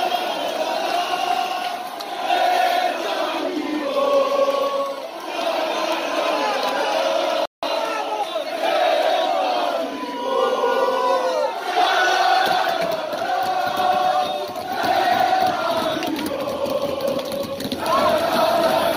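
The audio has a playback stall from 7.46 to 7.63 s: the sound cuts out mid-flow for about 0.17 s, then resumes. A waveform shows a flat gap, a spectrogram a blank vertical band. The likely cause is the player running short of data or being briefly blocked.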